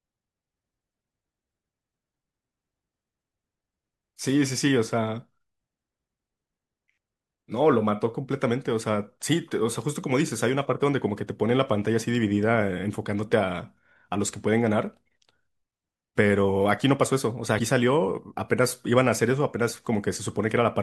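At 17.56 s the speech is interrupted by damaged data in a compressed stream. It lasts to about 17.60 s, roughly 46 ms. Part of the compressed data there is wrong. The bytes may have been lost, zeroed or overwritten. The decoder cannot read those frames properly and loses its sync. It hunts for the next valid frame header before playback resumes. The result is a brief chirp or blip that cuts across the speech.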